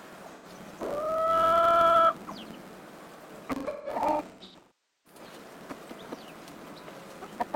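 From the start, a filter restarted on every block puts a small tick at the head of each block. The ticks fuse into a buzz at 93.8 Hz, which fits a 512-sample buffer. Unlike a fixed hum, the buzz rises and falls with the sound's level.

From 0.35 to 0.46 s, AAC frame loss with concealment leaves an 85 ms smeared, phasey patch, rebuilt from the last good spectrum. From 3.55 to 5.19 s, losses totalling 1.1 s are scattered across about 1.5 s. The longest, around half a second, decays toward silence and fades back in, rather than cutting off abruptly like a plain dropout.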